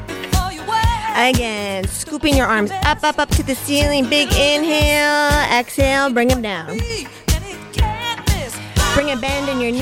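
The level drops abruptly by about 6 dB three times, from 1.37 to 2.23 s, 6.33 to 6.90 s, and 9.0 s to the end. The likely cause is one channel dropping out, so the mono sum loses half its shared content and anything unique to that side.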